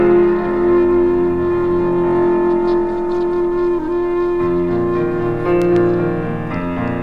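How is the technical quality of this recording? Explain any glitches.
The recording has one clear glitch, a loud pop between 5.62 and 5.78 s. A sudden voltage pulse, likely from a plug, switch or static discharge, entered the signal chain. It is heard as two sharp pops in quick succession, roughly 10 dB louder than the surrounding sound, which keeps playing underneath.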